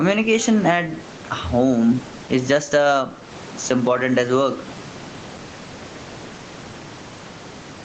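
Gain pumping throughout: the gain swings about 10 dB under loud bits, likely a fast limiter fighting too much mic gain.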